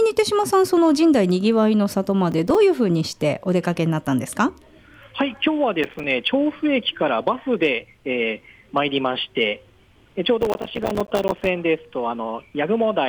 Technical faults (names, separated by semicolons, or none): processor overload crackle